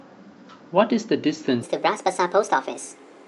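From 1.63 s on, a wrong sample rate makes the speech 1.45 times faster and 6.45 semitones higher, consistent with 22 kHz audio played at 32 kHz. On the spectrogram, the harmonics leap upward.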